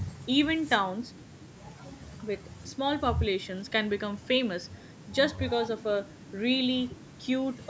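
Speech clip with no audible technical faults.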